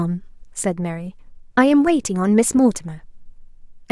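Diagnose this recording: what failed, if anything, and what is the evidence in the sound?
There's a DC step at 1.87 s. You hear a single low thump or click there, and the speech carries on through it untouched. After that point the waveform's zero line sits displaced, by about -27 dBFS, right through to the end of the clip. That points to the converter or the analogue input stage: something like an offset recalibration or a switched-in input shifted the baseline mid-take, and it never recovered.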